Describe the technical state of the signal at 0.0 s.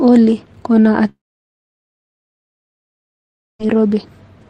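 At 0.0 s the speech signal is intact, with no audible fault at that point.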